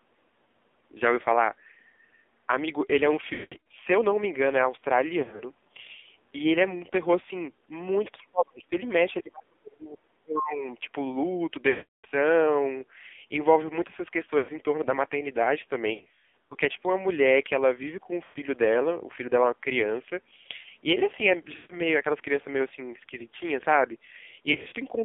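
The whole clip is boxed-in and buzzy, with synthetic, rough speech and nothing above roughly 3.6 kHz or below 250 Hz. That heavy damage points to the AMR narrowband mobile codec at a low rate, around 5.9 kbps. Its vocal-tract model, driven by sparse pulses, can't carry much detail at that rate.

From 3.34 to 3.64 s the speech warbles, smears and fades in broken patches. This is lost AMR speech frames: about 280 ms went missing, with one run of 180 ms, and the decoder stretched its last good pitch and tract settings with falling gain. A shorter scattered version follows from 5.20 to 5.44 s, with about 120 ms lost in brief gaps.

From 8.19 to 8.72 s, and again from 9.21 to 10.7 s, the speech sinks sharply, falling by something like 35 dB at its deepest. This is likely speech suppressed in double talk, where an echo canceller mistook overlapping talk for echo and turned the talker down.

Further lost AMR speech frames drag and fade the sound at 11.70 to 12.06 s (about 340 ms) and 14.38 to 14.52 s (100 ms). 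From 15.94 to 16.55 s the damage is scattered, about 340 ms in short runs. More follow at 18.24 to 18.39 s (120 ms), 21.56 to 21.77 s (140 ms) and 24.52 to 24.76 s (140 ms, scattered). After each one the speech returns weak or rough for a moment.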